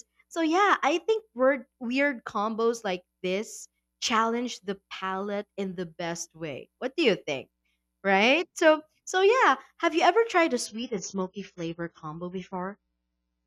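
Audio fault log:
10.66 to 13.46 s, adaptive stream at a lower bitrate: the speech abruptly turns dull and watery, with nothing above 7 kHz and no gap at the switch. The player dropped to a leaner encoding for the final stretch, which fits a fall from 96 to 16 kbit/s AAC.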